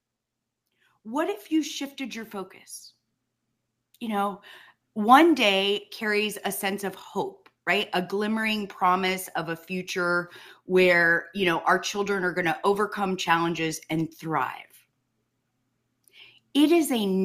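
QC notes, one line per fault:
1.02–2.62 s and 3.99–6.94 s: automatic gain rising. Level swells by about 6 dB, then about 4 dB. Voice and background climb together, slowly, unlike compressor pumping.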